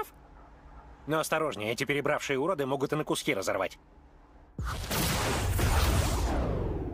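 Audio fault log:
No fault can be heard anywhere in this audio. There is nothing to log for any part of it.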